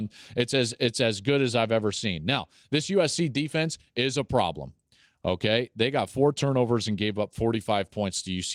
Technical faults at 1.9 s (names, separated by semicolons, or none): none